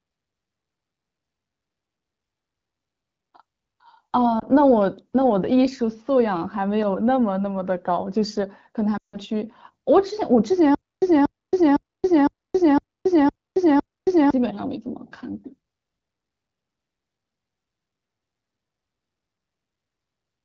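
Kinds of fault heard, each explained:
Lost AMR speech frames: Corrupted frames fail their check, so the decoder fills the gap from the last good frame at falling gain. A brief dip near 4.40 to 4.44 s. From 8.97 to 9.18 s, about 160 ms, the sound drops to near silence within two frames.
Stutter with silent gaps: The same fragment of about 236 ms repeats, each time followed by about 272 ms of digital silence, every 508 ms. It recurs seven times from 10.75 to 14.30 s. The sound meant for that span is missing, likely from a stalled stream retrying.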